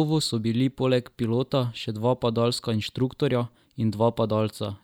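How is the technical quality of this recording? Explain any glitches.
The recording is technically sound, with no glitches or other faults to be heard anywhere in the signal.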